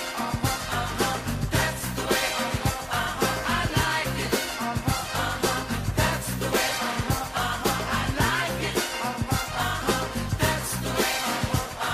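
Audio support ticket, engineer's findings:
No faults found on listening; nothing to attribute to capture, processing or transport.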